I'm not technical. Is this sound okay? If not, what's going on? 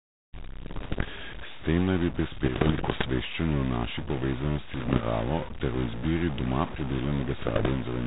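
No. A stuck bit runs through the whole recording: the speech has a grainy or buzzy roughness, and the quiet gaps between words hiss. The likely cause is one digit in each stored sound value being jammed on or off, so about half the values come out wrong.

Bit errors on an ADPCM link, the kind of compressed digital connection a cordless phone uses, show up at 0.66 to 1.12 s, 2.44 to 3.05 s (between "naj bi" and "o naši"), 4.74 to 5.04 s and 7.34 to 7.69 s. Roughly one bit in a hundred got flipped in transit. Each error throws off the decoder's running estimate of the sound, so you hear pops and gritty bursts with brief jumps in loudness.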